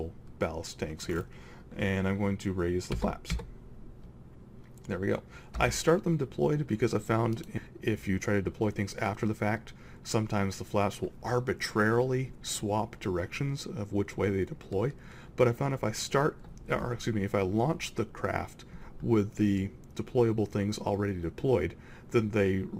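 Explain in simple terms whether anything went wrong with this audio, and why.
At 7.57 s the sound abruptly jumps forward, with about a second of audio simply gone and the two sides stitched together with no gap. This is a skip ahead: a chunk of audio was dropped in transit or discarded by the receiver's buffer while later audio was already waiting.

From 7.67 to 9.35 s the sound runs slightly fast, about 110% speed, yet keeps its normal pitch, so it feels a bit hurried. This is a jitter buffer speed-up: the receiver had too much audio stored, so it trimmed many tiny slices, roughly a fifth of a second in total, to catch up.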